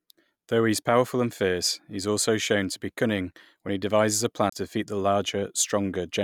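At 4.50 to 4.52 s, after "when he devises a" and before "defeat the", a CD skip occurs: the laser lost its track and jumped to another turn of the spiral, so playback mutes for roughly 30 ms, ticks, and resumes abruptly at a displaced point in the speech.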